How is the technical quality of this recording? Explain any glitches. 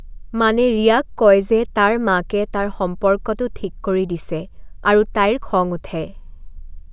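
No glitches can be heard in this recording. Nothing in the speech stands out as a technical problem.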